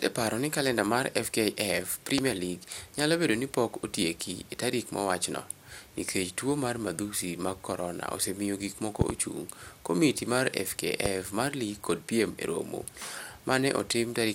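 A loud pop lands at 2.18 to 2.21 s, a pair of pops at 9.01 to 9.12 s between "osemiyo gik moko" and "ochung' komiti mar", and another single pop at 11.06 to 11.08 s, after "moko ochung' komiti mar" and before "mar lig kod piem". Each is a sharp thump peaking about 20 dB above the speech, which continues underneath. The likely cause is a sudden voltage step from a connector, switch or static discharge entering the signal chain.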